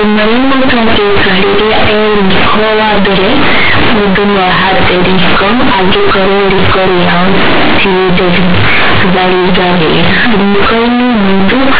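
From start to finish the speech is mangled by companded audio read as linear. The underlying G.711 mu-law telephone coding is itself intact, so the band still stops at 4 kHz, but those logarithmic bytes are being played straight out as plain 8-bit samples with no expansion. Every sign change slams the output across roughly half its range, so soft passages come out as big as loud ones. You hear a harsh, very loud buzz, with heavy noise filling the pauses.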